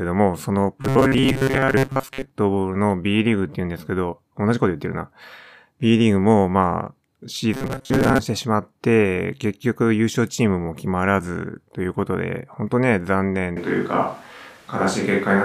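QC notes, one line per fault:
0.82–2.31 s and 7.54–8.19 s: robotic sound from repeated short buffers. A rigid metallic buzz at 134 Hz, likely because roughly 7.5 ms segments are being looped while most of the real audio is skipped.
13.57 s to end: switch to a distant microphone. The sound turns abruptly roomy and hollow with thinner bass and room noise around 30 dB below the speech, likely from the close microphone dropping out. The level stays about the same.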